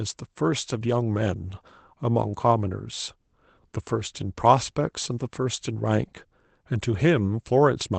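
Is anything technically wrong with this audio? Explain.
No, nothing's actually wrong here: it's speech that has come through a call connection, so the highs stop at around 8 kHz and there's the coding texture that kind of link normally leaves, which is just what the path sounds like rather than a problem.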